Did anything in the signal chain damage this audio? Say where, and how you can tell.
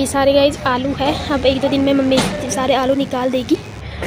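Yes: a thin, steady 100 Hz buzz from 1.1 to 3.8 s is DECT cordless phone buzz, where analogue wiring rectified 10 ms radio bursts, about 30 dB below the signal.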